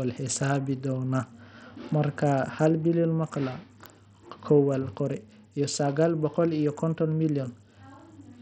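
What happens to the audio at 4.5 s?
At 4.5 s the speech carries the same damage heard across the whole clip: treble flickering in and out over gritty, grainy noise, which points to heavy Bluetooth SBC compression, likely at a starved bit pool near 64 kbps. Unlike a clean low-pass, the top band comes and goes with added grit.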